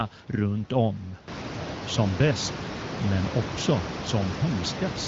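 Nothing goes wrong in this one; the background room noise that picks up about a second and a half in belongs to the recording, and the HD Voice band, topping out near 7.6 kHz, is simply how the call was carried.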